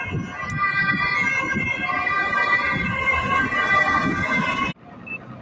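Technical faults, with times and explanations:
Throughout: noise suppressor applied to music or sounds. A speech-oriented suppressor stayed active, treating sustained and ambient content as noise, so level swings by roughly 10 dB and the sound pumps and thins. On a waveform the envelope breathes unevenly, and a spectrogram shows sustained bands flickering between strong and faint.
0.05–0.45 s: sound cut by the noise suppressor. For about a third of a second the suppressor judged this material to be noise and pulled it down by up to about 8 dB, so it dips in level. The waveform narrows there, and spectrogram energy fades across the band.
4.72–5.42 s: sound cut by the noise suppressor. Over the final 0.7 s the material is taken for noise and cut by up to about 11 dB, so it sinks in level. The waveform narrows there, and the spectrogram darkens.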